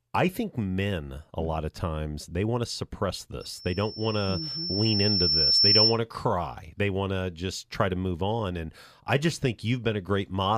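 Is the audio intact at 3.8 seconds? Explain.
No. At 3.8 seconds a thin 5.4 kHz tone is swelling into a loudspeaker feedback squeal that runs from 3.40 to 5.99 s, building over about two seconds to roughly 10 dB above the speech. A microphone is hearing its own loudspeaker, and at that frequency the loop gain exceeds one.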